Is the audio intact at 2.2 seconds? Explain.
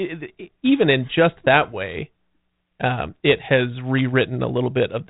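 Yes, the audio is intact at 2.2 seconds, with no fault at that moment.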